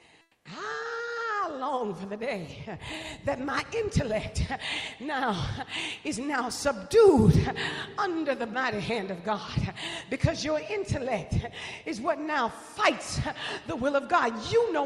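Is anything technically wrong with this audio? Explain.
Yes. From 0.21 to 0.45 s, comfort noise in place of the background: a steady, featureless hiss about 6 dB quieter, likely from discontinuous transmission, showing as a smooth, uniform band on a spectrogram.

At 0.42 s, onset clipped by the voice detector: the first 30 ms likely never arrive, so the sound starts abruptly, a sharp vertical edge on the waveform.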